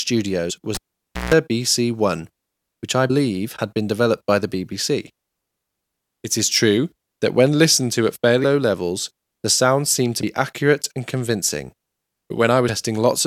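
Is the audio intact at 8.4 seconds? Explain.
No. At 8.43 s compressed frames are skipped. About five frames of roughly 23.2 ms each never play, so around a tenth of a second of speech is lost. The speech jumps ahead by the length of the missing frames.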